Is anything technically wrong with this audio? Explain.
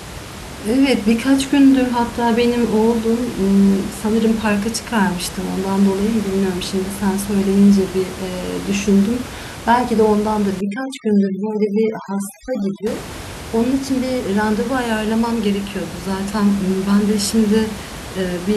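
Yes. From 10.61 to 12.87 s the background drops and breaks up into twinkling specks. This is overdone noise removal: an aggressive reduction stage shuts down frequency bands it mistakes for noise, taking quiet speech detail with them. Outside that stretch, room noise sits about 14 dB below the speech.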